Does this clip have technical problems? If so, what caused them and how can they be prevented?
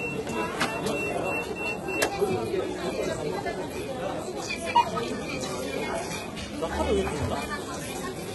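Yes. Throughout, HE-AAC compression damage is heavy. Treble above about 11.8 kHz is gone, and the upper band sounds gritty and metallic, which fits a 16 kbps encode that likely rebuilt highs by spectral band replication. Encoding at a higher bitrate, or with plain AAC, prevents this.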